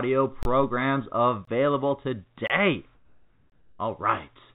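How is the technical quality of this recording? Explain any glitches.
The speech carries two audible faults, heard through a narrowband call path with nothing above 4 kHz, which fits a G.711-style telephone codec.

Gap between chunks: At 0.43, 1.45, 2.47 and 3.50 s the sound drops out for about 23 ms, about once per second. The audio was delivered in 1-second chunks, and a short stretch of silence was left at each join. No sound is lost, but it stutters at each boundary.

Comfort noise in place of the background: From 2.95 to 3.79 s, about 0.82 s, the background between phrases turns into a flat, featureless hiss about 5 dB quieter than the real room sound, which sat about 40 dB below the loudest speech. The likely cause is discontinuous transmission. The sender stopped transmitting during the pause, and the receiver filled it with synthetic noise shaped roughly like the background.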